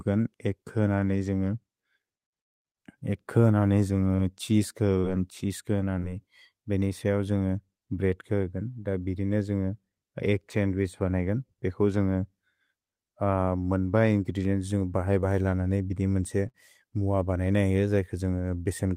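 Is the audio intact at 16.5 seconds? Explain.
No. From 16.48 to 16.56 s there is a burst of packet loss: several packets never arrived, so the receiver stretched the last sound for about 54 ms while fading it. Unlike a clean dropout to silence, the gap is smeared over, then speech resumes with about 60 ms missing.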